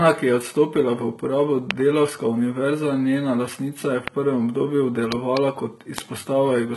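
From the start and through the whole speech clip, the sound carries the heavy damage typical of HE-AAC compression, likely HE-AAC v2 at a very low rate, which fits about 16 kbps. Unlike plain low-bitrate AAC, which would simply go dull, treble is present up to a cutoff at 11.8 kHz. That upper band is rebuilt by copying lower bands upward, so its harmonics do not match the real ones. Sibilants sound gritty and metallic rather than muffled.

A loud pop sits on top of the audio from 1.71 to 1.73 s, right after "je odstopila v uporabo", and others come at 4.08 to 4.10 s and 5.98 to 6.00 s. Between 5.12 and 5.39 s there are two pops in quick succession. Each rises roughly 20 dB above the speech and is likely a voltage spike, such as from a switch, a plug or static. The speech continues unbroken beneath every pop, which separates them from dropouts or edit clicks.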